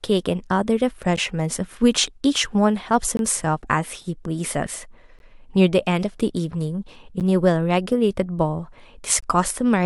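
Short, hard-edged silences cut into the speech at 1.16 s, 3.17 to 3.19 s, 5.19 s, 7.20 s and 9.21 to 9.23 s, lasting roughly 11, 21, 13, 10 and 20 ms. This is a gap between stream segments. Adjacent 2-second segments don't butt together exactly, so the player pads each seam with silence. Unlike a dropout, nothing is missing and the sound resumes intact, only slightly late. The steady 2-second rhythm marks it as segment boundaries rather than random network loss.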